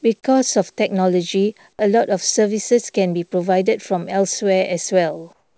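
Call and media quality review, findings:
Comfort noise in place of the background, 5.33 to 5.57 s, to end of clip. Likely sender-side DTX: voice detector stopped transmission, receiver synthesised filler noise, which fits RFC 3389-style comfort noise. Real background, already about 43 dB below the loud parts, is replaced by a steady, featureless hiss about 10 dB quieter for roughly a quarter second. Call path audible throughout as wideband, nothing above 8 kHz, pointing to G.722.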